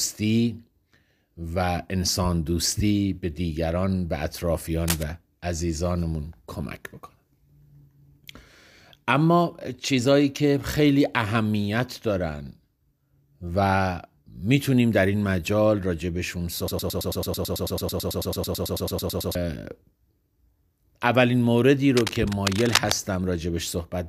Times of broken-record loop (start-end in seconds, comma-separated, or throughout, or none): 16.68-19.35